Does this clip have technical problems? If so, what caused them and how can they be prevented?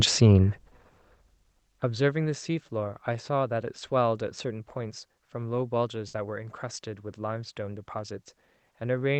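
Yes. Burst of packet loss at 0.91 s and again at 6.07 s: in both places about 60 ms of the call stream never arrived in time, so the receiver stretched the last sound it had and let it fade, giving a brief held buzz or dying hiss, after which the speech picks up with about 60 ms skipped. The Opus coding underneath sounds as expected. A larger jitter buffer, forward error correction or a steadier network connection would prevent this.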